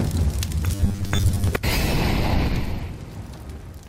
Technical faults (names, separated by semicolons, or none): robotic sound from repeated short buffers; compressed frames skipped